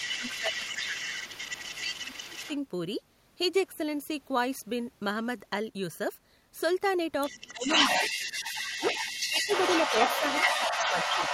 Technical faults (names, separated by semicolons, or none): echo leak; speech suppressed in double talk